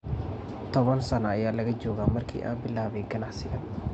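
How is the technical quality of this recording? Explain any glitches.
Nothing here stands out as a glitch; the speech comes across steady and intact, with no technical hiccups to point to.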